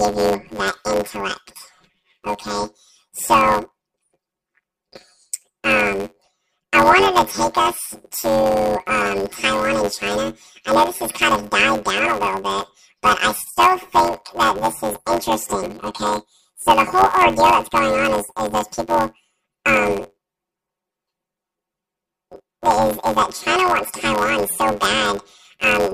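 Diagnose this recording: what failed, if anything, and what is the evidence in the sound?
The speech carries a robotic buzz throughout, near 92 Hz, with no clear octave shift. This is planar audio read as interleaved, a sample-format conversion fault. Each 10.88 ms block plays twice at double speed, left then right, chopping the sound at that rate.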